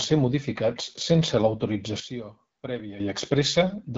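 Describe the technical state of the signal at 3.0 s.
At 3.0 s the signal comes out of a sudden gain jump. From 2.0 s, right after "ser modificats sense", the whole signal, speech and background noise together, drops by about 12 dB, and at 3.0 s it snaps back to its earlier level with no ramp. The cause is likely a gain setting or bit shift applied in a single sample step. A click can accompany the jump. On the waveform the envelope forms a one-second trough with vertical edges at 2.0 s and 3.0 s. On a spectrogram the trough shows as a uniform dimming across all frequencies, bounded by sharp vertical lines.

Underneath, the AMR wideband (HD Voice) codec damage runs through the moment as it does through the whole clip. The speech has a plainly audible rough, raspy texture, which fits one of the lowest AMR-WB modes, around 8.85 kbit/s. The codec models the vocal tract up to 6.4 kHz and fills the band above with shaped noise. 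A spectrogram shows a smooth, noise-like band above 6.4 kHz and nothing at all above 7.7 kHz.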